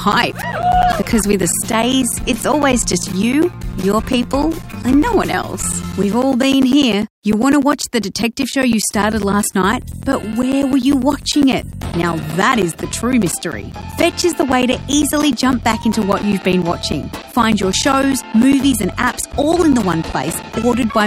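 From 0.12 s to 20.93 s there are periodic USB or driver dropouts. Every 0.1 s, about 10 ms of audio is replaced by silence. Something likely stalls the audio path on a fixed schedule. The result is a steady ticking, ten times a second.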